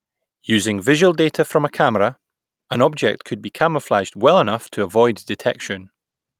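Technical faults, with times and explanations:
Throughout: clock drift between sender and receiver. The sender's audio clock runs roughly 4 percent fast relative to the receiver's, so samples arrive slightly quicker than they are played out and the jitter buffer keeps creeping toward overflow. To hold latency in check, the receiver must keep discarding small slices of the stream, and those trims leave faint hiccups scattered across the speech at uneven intervals rather than any single obvious break.
0.05 to 6.40 s: repeated timing corrections. Because the stream comes in about 4 percent too fast, the receiver keeps cutting short pieces out of it, all in the same direction, so the speech is effectively played at 104 percent. The cuts are small and irregularly spaced, heard as slight stumbles and a tempo that feels a touch uneven rather than as clear gaps or clicks.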